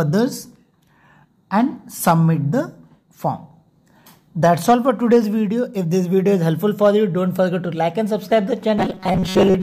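From 8.78 s to the end, the sound turns into a rigid, metallic 188 Hz buzz, robotic sound from repeated short buffers, likely caused by most of it being replaced with repeats of a roughly 5.3 ms chunk.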